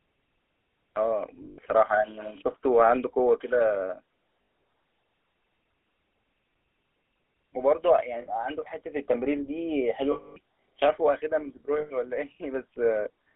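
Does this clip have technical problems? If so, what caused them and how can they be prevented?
Yes. The whole clip carries the gritty, buzzy roughness of the GSM full-rate codec, which fits a 13 kbps stream. The sound is squeezed into a 300 Hz to 3.4 kHz telephone band. The codec rebuilds the vocal tract from a thinned pulse excitation, and that causes the gravel. Using a wideband codec such as AMR-WB or Opus would prevent it.

There are also lost GSM frames at 1.42–1.59 s, 4.42–4.48 s, 8.22–8.29 s, 10.12–10.37 s and 11.78–11.92 s. The first gap is broken up, with its longest run near 70 ms. In each gap, the last good frame is replayed, giving a metallic ring. The longest loss is 240 ms at 10.12 s. A cleaner radio link, with stronger error protection or retransmission, would prevent these dropouts.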